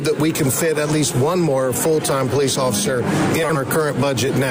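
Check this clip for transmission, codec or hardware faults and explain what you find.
One transmission fault is audible. Frames out of order at 3.43 to 3.57 s: two adjacent 60 ms blocks were decoded swapped, so the sound garbles into a brief flutter.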